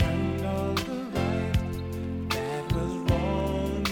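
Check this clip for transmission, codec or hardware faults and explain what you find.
One fault stands out: a short corrupt frame decoded at 2.71 to 2.73 s. It sounds like a sharp, squeaky blip of noise that cuts across the sound for roughly 20 ms and peaks around -10 dBFS. The cause is damaged data inside a few consecutive compressed frames. The decoder played them rather than discarding them, so wrongly read gain values and spectral codes put energy at frequencies that don't belong there.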